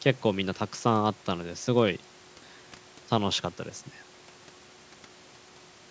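No technical faults are audible.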